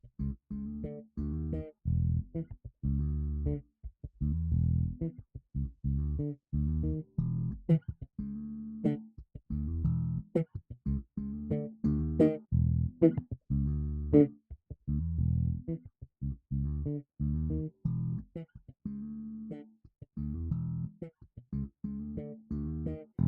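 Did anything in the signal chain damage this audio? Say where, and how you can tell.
Yes. The call-processing stage's noise suppressor misjudged parts of the sound as noise and pulled them down, with the sound cut by the noise suppressor at 2.45–2.8, 3.63–4.18, 9.12–9.5, 10.49–10.86, 14.34–14.88 and 19.7–20.17 s. Each dip reaches about 20 to 22 dB below the surrounding level, lasting a few hundred milliseconds, so sustained or decaying sound sinks in level or has its tail clipped short while sharper onsets still get through.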